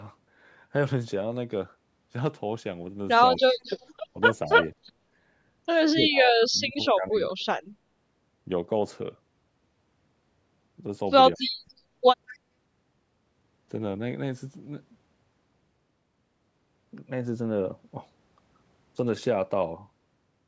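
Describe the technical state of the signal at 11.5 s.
An echo leak spans 11.4 to 11.54 s: a faint, discrete copy of speech arrives 214 ms late, likely loudspeaker pickup the canceller missed, unlike diffuse reverb.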